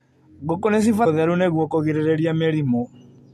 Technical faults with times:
1.05 damaged data in a compressed stream

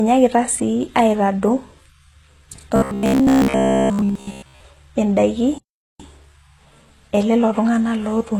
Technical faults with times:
0.00-8.39 HE-AAC compression
2.76-4.60 robotic sound from repeated short buffers
5.58-6.00 playback stall

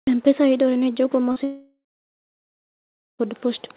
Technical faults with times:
1.32-1.38 short concealed packet loss
1.44-3.21 long network dropout

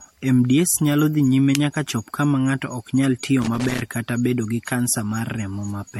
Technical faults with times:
0.00-6.00 generation loss
3.42-3.82 loose connector crackle

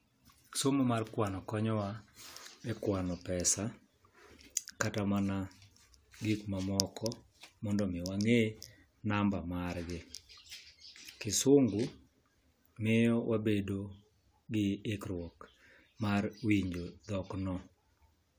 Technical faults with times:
none

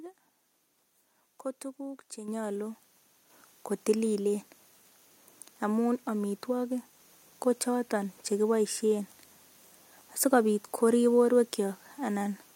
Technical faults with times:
2.28 microphone volume stepped up
3.30 microphone volume stepped up

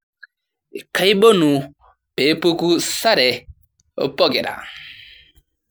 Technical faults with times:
0.00-5.71 generation loss

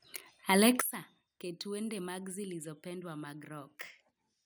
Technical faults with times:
0.81-4.46 sudden gain jump

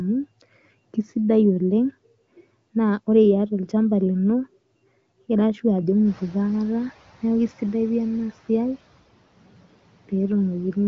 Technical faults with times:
6.05-6.94 noise suppressor catching up

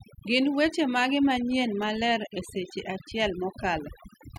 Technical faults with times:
0.00-4.38 overdone noise removal

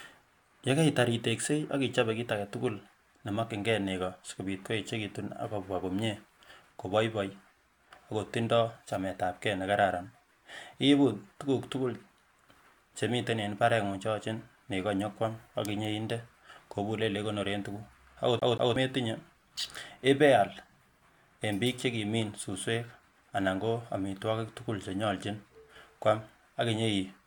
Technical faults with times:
18.39-18.76 CD stuck on one turn

